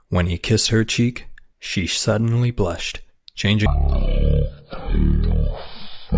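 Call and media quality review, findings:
Wrong sample rate, 3.66 s to end of clip (6.18 s). Playback clock mismatched with capture, no resampling in path; probable component: output device or resampler config. Speed drops to one third and pitch falls about 19 semitones, which fits 48 kHz audio played at 16 kHz. Speech turns slow, deep and dragged.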